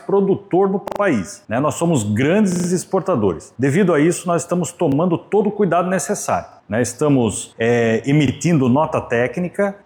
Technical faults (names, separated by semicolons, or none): repeated buffer